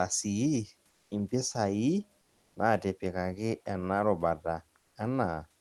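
From 0.89 to 1.11 s, a pause of about 220 ms loses its real room background and is filled by comfort noise in place of the background: a flat, even hiss at nearly the same level, within about 1 dB. The likely cause is Opus discontinuous transmission halting the audio during silence while the receiver synthesises noise. On a spectrogram the band turns smooth and textureless; the waveform shows steady, uniform fuzz.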